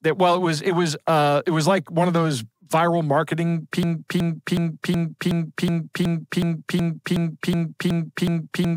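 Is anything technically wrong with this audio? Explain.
Yes. From 3.83 s to the end, the speech falls into a broken-record loop: a 370 ms fragment repeats exactly, back to back, 13 times, and nothing new follows. The likely cause is a stalled player, encoder or stream that kept resending the last fragment it held, so the speech that should have come next is lost. Unlike an echo, the repeats don't fade or overlap, and unlike a stutter, the loop never recovers.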